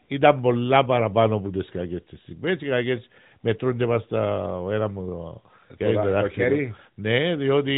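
Nothing stood out as a technical fault on listening to this speech.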